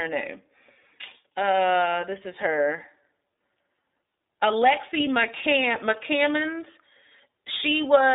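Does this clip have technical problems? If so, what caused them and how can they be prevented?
Yes. Throughout the clip the speech has passed through the iLBC codec, a narrowband VoIP coder that handles each 30 ms frame on its own, at a rate that fits its 13.33 kbps mode. Nothing above 3.8 kHz survives and the band sits at roughly 300 Hz to 3.7 kHz, so the voice sounds muffled and telephone-like. The coding damage is plainly audible as a rough, slightly synthetic edge. To prevent it, use a wideband codec such as Opus.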